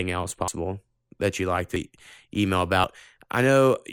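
Three quick skips break up this speech recording, at 0.48, 1.76 and 2.84 s, each heard as the sound jumping ahead instead of pausing. The first loses roughly a tenth of a second and the later two around 40 ms each. The likely cause is a dropped buffer (overrun), where the capture side didn't collect its samples before the hardware overwrote them, so the two sides of each gap got joined directly.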